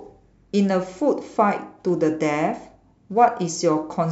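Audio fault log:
1.89 s: dropped samples, heard as a single sharp click in the speech. A couple of samples, roughly 0.04 ms of signal, likely went missing, so the waveform jumps straight to a later value; that step is far too brief to remove audible sound, only to click.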